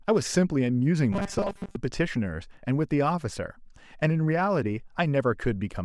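From 1.13 to 1.76 s the speech takes on a robotic sound from repeated short buffers: a rigid, metallic buzz pitched at 200 Hz that still roughly tracks the words. The likely cause is fresh audio arriving too seldom, so playback keeps looping a 5 ms slice for most of that stretch while the real audio is skipped. A spectrogram shows evenly spaced horizontal harmonics every 200 Hz; the waveform shows identical 5 ms cycles repeating.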